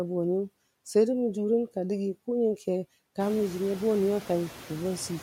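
A noise suppressor is working across the whole of this speech clip, cutting the bands it judges to be steady noise by about 16 dB and updating that decision frame by frame. As a result, the background is pulled down in the pauses but comes back up underneath the talking, so the noise floor pumps with the speech rather than staying put. The room noise itself is genuine; it rises by about 15 dB at roughly 3 s and then sits about 17 dB below the speech.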